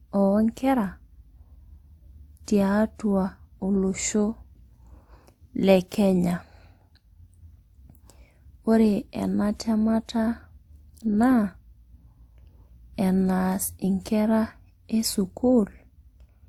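From start to finish the speech carries two overlaid flavours of codec grit. That's likely transcoding between lossy codecs. It points to an old WMA encode near 96 kbit/s redone as Opus at 48 kbit/s, each stacking its own artefacts, with nothing above 20.1 kHz.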